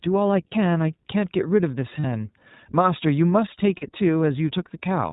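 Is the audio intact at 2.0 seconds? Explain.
No. Lost iLBC frames run from 2.00 to 2.06 s: about 40 ms of packets, which fits two 20 ms frames, went missing, and the decoder filled the hole by repeating the last pitch cycle blended with noise. It sounds like a brief buzzy, held vowel before the voice snaps back.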